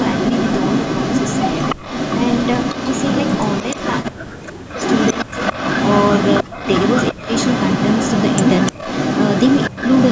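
From the first moment to the end at 10.1 s, an echo leak runs under the speech: a copy trailing about 0.3 s behind, roughly as loud as the original, likely from a loudspeaker echo the far end's canceller failed to remove. On a spectrogram every syllable's harmonics appear twice, offset in time; the waveform shows overlapping, smeared envelopes.

The speech suppressed in double talk comes in five dips, at 1.75 to 1.82 s, 4.11 to 5.33 s, 6.43 to 7.28 s, 8.72 to 8.83 s and 9.68 to 9.78 s. The speech ducks by about 30 to 40 dB, likely because the canceller confused talker with echo. These appear as abrupt near-silent notches in the waveform and dark vertical gaps across the spectrogram.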